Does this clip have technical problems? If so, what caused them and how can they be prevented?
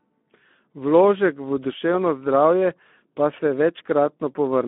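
Yes. The whole clip has passed through the Speex codec, a CELP speech coder that rebuilds the signal from a predictive filter and a coarsely coded excitation. The coarseness here fits a bitrate around 11 kbps. Too few bits for the excitation leave plainly audible coding damage, a rough, grainy texture across the speech. The line also limits the band to roughly 200 Hz to 3.5 kHz, which strips the lows and the airy top. To prevent this, use a modern wideband codec such as Opus at a higher bitrate.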